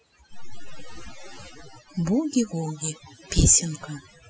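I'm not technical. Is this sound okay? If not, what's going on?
No. Throughout this speech recording, the fault is overdone noise removal. A cleanup tool meant to strip out background noise was set far too aggressively. Wherever part of the sound came close to what it judged to be noise, it pushed it down hard, and softer parts of the voice were removed along with it. That leaves gaps between phrases that sound almost dead, with twinkling, warbling specks.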